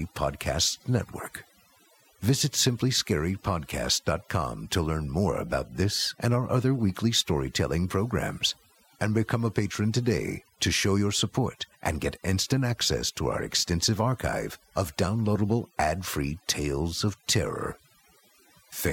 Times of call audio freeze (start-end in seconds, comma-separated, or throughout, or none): none